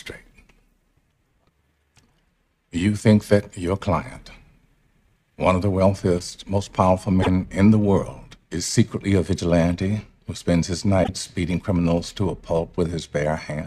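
At 7.19 s and again at 11.01 s, roughly 90 ms of damaged data in the compressed stream garbles the audio. The decoder misreads the corrupted frames, loses sync and resumes at the next valid frame header.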